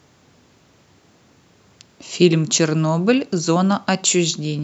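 No dropouts, distortion, level jumps or other technical faults can be heard at any point in the recording.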